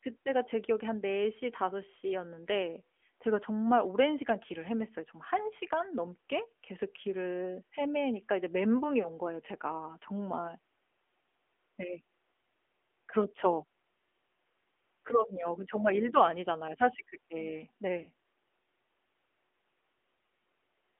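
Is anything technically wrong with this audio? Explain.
Yes. Throughout, the speech passes through the AMR narrowband mobile codec. Its band runs from 250 Hz to 3.4 kHz, and the vocal-tract model gives plainly audible buzzy, synthetic coloration that fits roughly a 10.2 kbps mode.

At about 9.02 to 9.08 s and 18.04 to 18.08 s there are lost AMR speech frames. Each is a brief dip or warble where the decoder repeated its last good settings at falling gain, which points to a single lost 20 ms frame.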